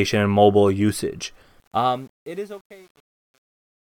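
A gain stage handling the fade-out keeps too few bits and adds no dither, which points to roughly 9-bit resolution, so truncation distortion on the fade sets in from 1.6 s. The speech turns gritty, and from 2.02 s to the end it is at its worst.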